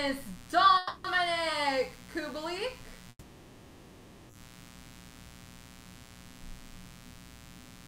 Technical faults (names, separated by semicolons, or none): mains buzz; call audio freeze